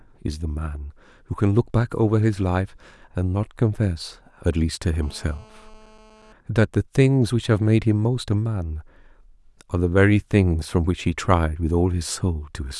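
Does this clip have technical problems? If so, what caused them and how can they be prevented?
Yes. A nearby GSM phone on a call transmitted radio bursts that the audio circuit rectified from 5.03 to 6.33 s, producing a steady, raspy GSM phone buzz at 217 Hz with harmonics, about 30 dB below the speech. To prevent it, keep mobile phones switched off or away from the microphone, cables and recorder.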